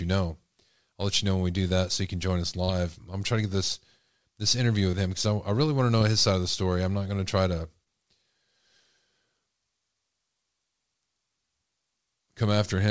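Brief smears break the speech at 2.64–2.73 s after "you can join us", at 4.91–4.95 s before "him because I", and at 7.85–7.88 s after "going to try to". Each is short concealed packet loss: 20 to 40 ms of audio arrived too late, and the receiver bridged the gap by extending the preceding sound.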